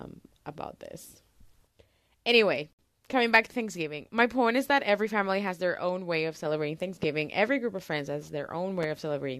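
Speech, with two kinds of fault. Two separately encoded pieces were joined without trimming the encoder's start-up delay and last-frame padding, so a gap at the join of encoded pieces opens from 2.73 to 2.79 s. The gap lasts about 62 ms, though the speech is silent for less than that because its edges are smeared, then resumes on "coming back to" as if nothing had been lost. Sudden voltage steps, likely from a plug, switch, static or driver glitch, entered the signal and were shaped by the circuits after them, giving a single loud pop at 7.03 s, just after "own way of celebrating", and another at 8.83 s, just after "group of friends has". Each lasts under 30 ms and peaks roughly 10 dB above the speech, which carries on underneath.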